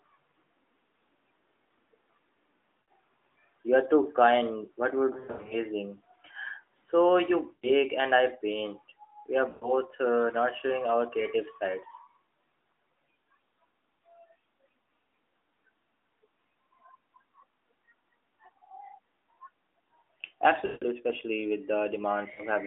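Lost AMR speech frames at 2.81–2.88, 5.14–5.56 (scattered bursts), 7.54–7.69, 9.50–9.72, 20.66–20.85 and 22.34–22.43 s: the decoder stretches the last good pitch and fades it, unlike a hard dropout's abrupt silence, within narrowband 12.2 kbps audio.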